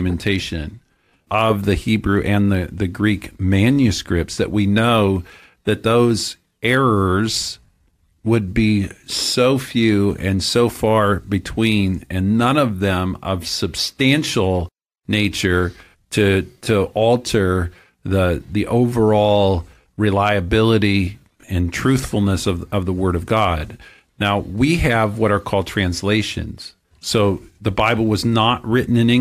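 No technical faults can be heard anywhere in the recording.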